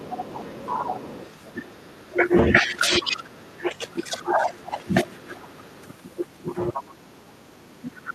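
A second, quieter voice sits under the speech from 0.0 to 2.27 s, about 15 dB down. This is the other side's voice leaking through, likely because the loudspeaker echo was only partly cancelled. It returns from 3.01 to 3.92 s at about 20 dB down, barely registers from 5.53 to 5.83 s, and comes back strongest, only about 10 dB below the speech, from 6.73 s to the end.

From 1.53 to 5.52 s the main speech repeatedly sinks, dulls and breaks up, for around three seconds in total and dropping as much as about 25 dB. This is speech suppressed in double talk. With both sides talking at once, the echo canceller likely couldn't separate the talker from the echo and turned everything down. The same happens more mildly, by about 15 dB, from 6.99 s to the end.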